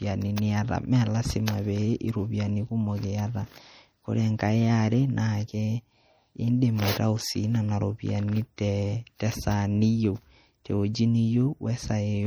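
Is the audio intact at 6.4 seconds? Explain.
No. At 6.4 seconds, as across the whole clip, the speech carries plainly audible MP3 compression damage, likely from encoding at a low bitrate; the degree fits roughly 48 kbps. Starved of bits, the encoder zeroes weak frequency lines that flicker on and off between frames, giving a watery, swirly texture with metallic chirps on s sounds and smeared consonant attacks. That frame-to-frame flicker, not a steady dullness, separates it from a plain low-pass filter, especially since content still reaches 21 kHz.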